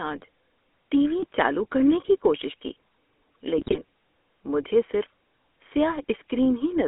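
Speech heard through the GSM full-rate codec for the whole clip. The audio is confined to roughly 250 Hz to 3.5 kHz, and the voice has the familiar buzzy, gravelly texture of that early codec, which fits a 13 kbps GSM full-rate stream. It rebuilds the voice from a vocal-tract filter fed with a coarse, regularly pulsed excitation, so the fine detail of the voice is replaced by that rasp. GSM bit errors break through twice: a brief squawk at 1.20 to 1.24 s and a longer burst of gargling and pops at 3.58 to 3.78 s. The first points to a few corrupted frames at roughly 1% bit errors, the second to around nine frames at about 4%. Flipped bits in the filter, pitch and gain parameters distort the spectral shape and level of each affected frame, which turns the voice into these harsh artefacts.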